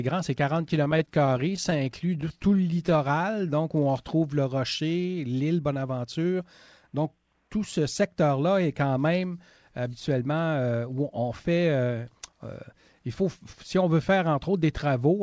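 Audio carried over a call link, band-limited with nothing above 8 kHz, which points to a wideband codec such as G.722, shows repeated stalls (stutter) from 0.62 to 3.83 s. Packets arrived late, so the jitter buffer kept running dry and the receiver stretched the last sound through many gaps of up to 20 ms, about 11% of that span. On a spectrogram these appear as frozen vertical slices. A jitter buffer slow-down runs from 2.74 to 4.04 s at 91% speed, adding 130 ms as repeated pitch periods rebuilt the reserve. The waveform shows identical cycles copied in a row, and the sound drags at unchanged pitch. Jitter buffer speed-ups follow from 5.97 to 6.40 s at 110% speed, removing roughly 50 ms, and from 6.80 to 8.23 s at 107% speed, removing roughly 100 ms. The receiver cut out short pitch periods to shed excess delay, so features on the spectrogram look compressed in time while harmonic spacing stays the same.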